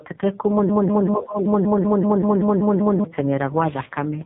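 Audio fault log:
throughout: AMR narrowband mobile codec. Nothing passes above 3.8 kHz, and the heavy coding damage makes the speech buzzy and synthetic, which fits one of the lowest AMR-NB modes, near 5 kbps. A spectrogram shows a hard, flat ceiling with empty space above it.
1.15–1.48 s: speech suppressed in double talk. The speech level sinks by up to about 20 dB for roughly a third of a second. The likely cause is an echo canceller turning down the talker while the far side also spoke. The waveform envelope shows a clear notch.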